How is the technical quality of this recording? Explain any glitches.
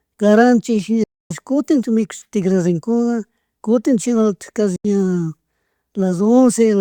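The speech breaks up twice. At 1.03 to 1.31 s and 4.76 to 4.85 s, the sound cuts to silence for about 260 ms, then 80 ms. It resumes further on, as if it had played on. This is likely a Bluetooth dropout, with packets arriving too late.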